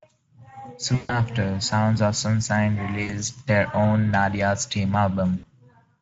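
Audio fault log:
throughout Speex codec. Speech sounds hoarse and grainy. The excitation gets too few bits to rebuild the voice cleanly, which fits a middle-to-low setting around 16 kbps. Upper frequencies come across as a thin, noise-like fill rather than real detail.
0.95–1.21 s, 3.03–3.14 s, 5.37–5.48 s VoIP packet loss concealed by the speech codec. Audio goes missing: about 140 ms in the first gap, about 60 ms in the others. The decoder stretches the last sound into a buzzy tone or coloured noise that fades. Sound stays weak briefly afterwards, as before "their own".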